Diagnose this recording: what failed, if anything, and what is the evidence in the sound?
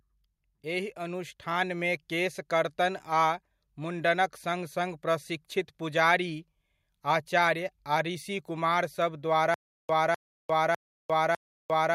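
Automatic gain rising, from 0.70 s to 1.88 s. This is a call-processing fault. Across that stretch of speech the level climbs by about 4 dB over roughly a second, and the background noise lifts by the same amount as the voice. That shared rise is the evidence that the gain stage moved, not the talker. The automatic gain control judged the incoming signal too quiet and ramped its gain up gradually until it reached a new target.

Stutter with silent gaps, from 9.54 s to the end of the recording. This sits at the playback or network buffer stage. A 251 ms fragment of the speech repeats four times. Each repeat is followed by about 351 ms of digital silence, giving a steady 602 ms cycle that never recovers before the audio stops. The likely cause is a stalled stream: each retry replayed the last buffered fragment and then ran dry, so the speech that should have filled those seconds is lost.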